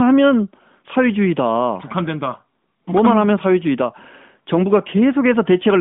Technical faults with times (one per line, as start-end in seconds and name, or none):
none